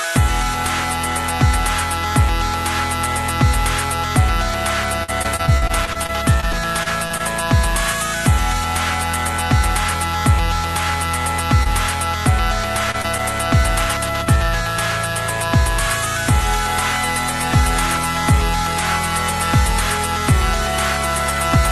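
A recording of everyday sounds carried over a call link, with the Opus codec's band limit at 12 kHz. From 5.03 to 7.21 s the link suffered repeated packet loss, producing a robotic sound: more than a dozen short holes arrived in quick succession, the longest about 48 ms. Each was patched by extending the preceding sound before the next dropout hit, so roughly a sixth of that stretch is synthetic fill. The result is a choppy, robotic texture with fragments missing. Later come three instances of short concealed packet loss, at 11.63–11.67 s, 12.91–12.96 s and 13.02–13.06 s, each losing about 20 ms of audio. The decoder bridged each gap by continuing the last sound and then blending back into the real signal, leaving a brief smear or wobble. The last two fall close together, giving a doubled hiccup just after 12.9 s.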